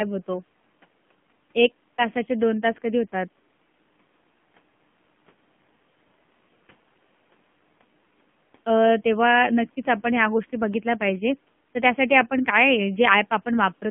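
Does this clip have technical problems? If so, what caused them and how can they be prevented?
Yes. AMR narrowband mobile codec damage runs throughout: the band is limited to 150 Hz to 3.4 kHz, and the buzzy, synthetic speech fits a low 7.4 kbps mode. Prevent it by recording locally or using a wideband codec at a higher bitrate instead of a narrowband mobile call path.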